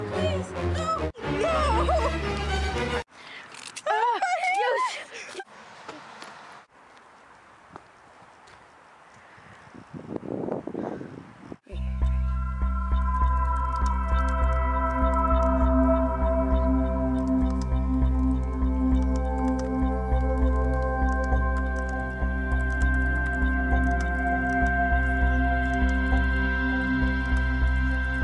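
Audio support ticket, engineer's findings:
No faults found in the audio; nothing to report for this ticket.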